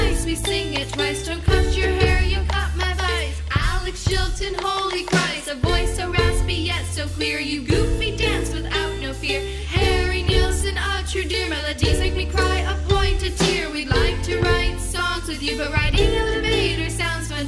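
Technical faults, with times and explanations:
Nothing stood out as a technical fault on listening.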